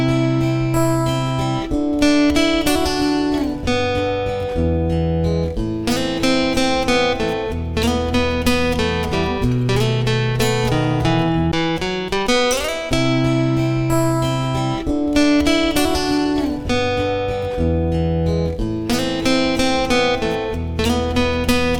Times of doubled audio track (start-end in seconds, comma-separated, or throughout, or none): none